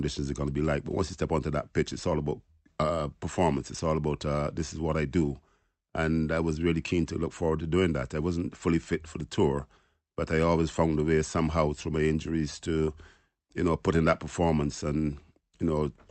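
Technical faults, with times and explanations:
Nothing here counts as a fault; the speech comes through an Opus call path working as it should, with its content topping out around 8 kHz.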